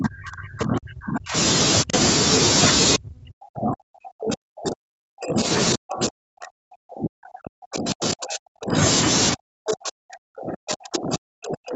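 From the start to 1.35 s, at 1.83–1.93 s, then 2.96–5.49 s, 5.74–8.78 s and 9.33 s to the end, the speech is pushed down in level, up to about 40 dB at its deepest and about 25 dB in the brief dip. Speech suppressed in double talk is the likely cause: the echo canceller mistook the near talker for loudspeaker echo and attenuated it. A waveform shows collapsed envelopes, and a spectrogram shows harmonics fading towards the 8 kHz band edge.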